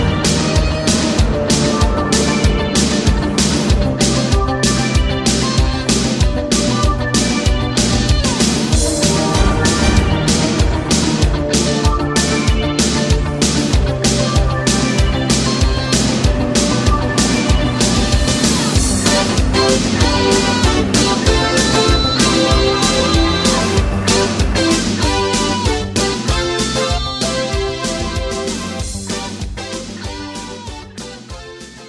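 No technical faults can be heard anywhere in this recording.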